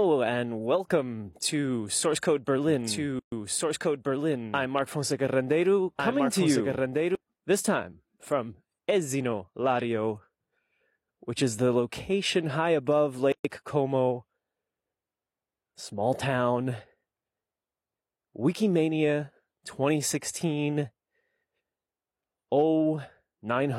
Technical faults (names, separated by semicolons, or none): doubled audio track; gap at a join of encoded pieces